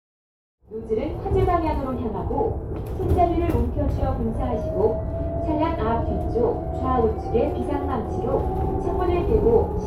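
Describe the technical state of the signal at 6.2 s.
At 6.2 s the signal is intact, with no audible fault at that point.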